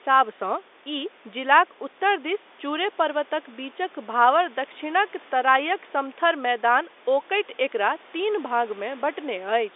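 No technical faults occur in this speech, so there is nothing to describe in time order.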